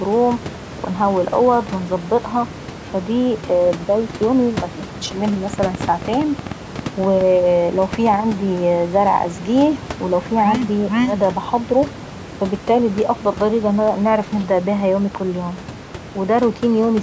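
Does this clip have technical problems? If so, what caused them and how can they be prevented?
Yes. A train of clicks runs from 5.54 to 8.15 s, starting just after "بداية يومي مبتاخخدش مني": about fifteen similar pops at an uneven pace, roughly 6 per second, peaking around 5 dB above the speech. The likely cause is electrical interference or a faulty connection or power supply injecting pulses. Unlike clipping crackle, these clicks don't follow the loudness of the speech and keep going through pauses. Shielding cables, moving away from noisy equipment, and using a stable interface prevents this.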